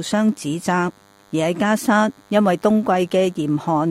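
A DECT cordless phone buzz runs throughout, a thin 100 Hz rasp of rectified radio bursts, rich in harmonics and well below the sound, unlike smooth mains hum.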